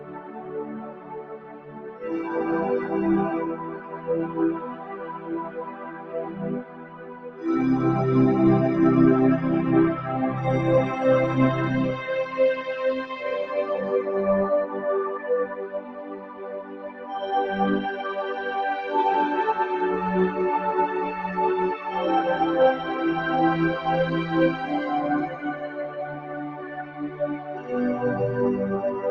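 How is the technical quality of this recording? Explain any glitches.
The recording has a clear, recurring processing fault. A speech-oriented noise suppressor was left active on this non-speech audio, and at six points it pulls the sound down sharply. The audio also passed through a call path that behaves as expected. Its top end stops at 12 kHz, which fits an Opus call codec running at a low rate of around 24 kbps.

Noise suppressor applied to music or sounds, across the whole clip: the suppressor treats steady tones, ambience and reverberant tails as noise and attenuates them. Sudden onsets pass largely intact. The gain it applies swings by about 15 dB as it decides what counts as noise, so the level pumps and flutters, and sustained material thins out instead of holding steady.

Sound cut by the noise suppressor, at 0.00–2.04 s, 3.46–4.09 s, 4.58–6.42 s, 6.61–7.43 s, 15.49–17.15 s and 25.27–27.72 s: in these stretches the suppressor classified the sound as noise and dug deeper than elsewhere. 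The deepest drops are about 9 to 10 dB. Held and decaying sound sinks audibly or has its decay cut short, while sharper attacks survive. The windows last from about 0.6 to 2 seconds, and the last runs nearly two and a half.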